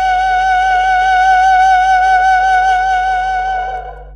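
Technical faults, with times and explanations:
Throughout, mains hum: a steady low tone at 50 Hz sits under the entire clip, roughly 20 dB below the wanted signal, with some weaker low harmonics above it. A ground loop or nearby transformer has coupled the power line into the signal path. On a spectrogram it shows as an unbroken horizontal line at 50 Hz with fainter parallel lines at its multiples. In the waveform, quiet passages carry a regular 20 ms ripple instead of settling to silence.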